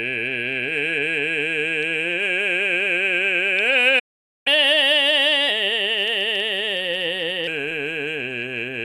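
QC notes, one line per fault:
3.99 to 4.47 s, playback stall: the music just drops out for about half a second, likely the player starving for data, then picks up where it stopped.
4.47 to 7.47 s, catch-up at higher speed: the backlog plays back at 1.15 times speed, so tempo rushes and pitch sits about two semitones sharp before settling back.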